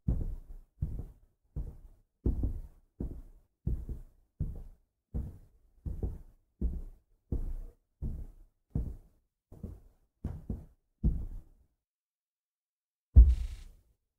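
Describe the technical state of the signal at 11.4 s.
Frames out of order from 11.23 to 11.41 s: two adjacent blocks of about 80 ms play swapped, giving a garbled flutter, with no time lost.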